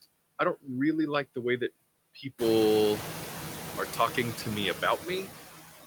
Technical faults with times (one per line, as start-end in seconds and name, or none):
0.00-5.86 noise suppressor artifacts